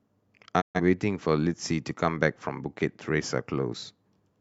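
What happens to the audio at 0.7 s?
At 0.7 s the speech is inside a digital broadcast dropout lasting from 0.60 s to 0.80 s. The receiver stopped getting usable frames, either from losing the signal or from frames failing their checksum, and muted its output until valid data resumed. The sound fades to silence over about 20 ms rather than cutting hard. Around 128 ms of programme is simply missing, which points to roughly three lost frames. When the sound returns, it picks up later in the programme, not where it left off.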